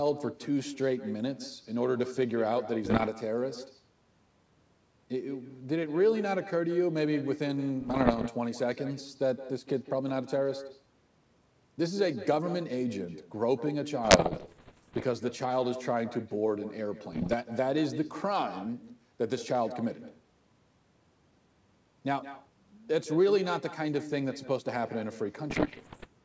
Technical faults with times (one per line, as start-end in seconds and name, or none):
0.00-26.24 echo with no canceller
2.84-3.09 bit errors on an ADPCM link
7.80-8.29 bit errors on an ADPCM link
14.04-15.04 bit errors on an ADPCM link
17.12-17.35 bit errors on an ADPCM link
25.50-26.07 bit errors on an ADPCM link